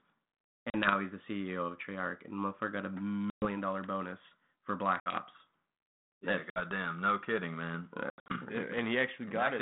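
Hard-edged holes of silence cut into the speech at 0.7 s, 3.3 s, 5.0 s, 6.5 s and 8.1 s, each followed by slightly distorted speech before the sound settles. The gaps last about 40 ms, 120 ms, 60 ms, 60 ms, and at 8.1 s 160 ms broken up over 200 ms, with the longest stretch 80 ms. This is packet loss on an ADPCM call. The missing packets are filled with silence, so the receiving G.726 decoder (running at 32 kbit/s in a telephone band) loses track of the sender's adaptive prediction and step size. It then takes some tens of milliseconds to fall back into step.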